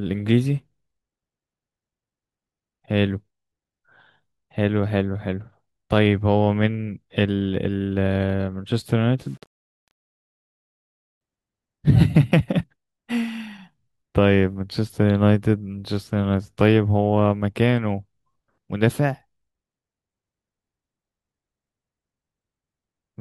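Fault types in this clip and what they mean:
Low bit depth without dither, 9.20 to 11.21 s: likely 8-bit rounding with no dither, so error tracks the speech, making quiet parts grainy, around 45 dB down.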